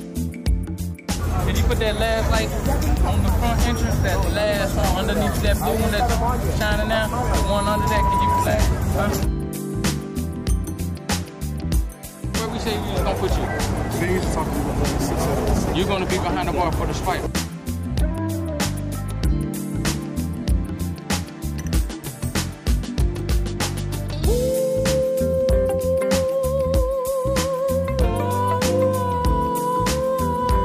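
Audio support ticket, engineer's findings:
Loudspeaker feedback squeal, 6.59 to 8.47 s. Single 978 Hz tone swelling over roughly a second and a half to around 5 dB above the programme. Mic catching its own speaker, loop gain over unity at that frequency. Check mic placement, monitor level.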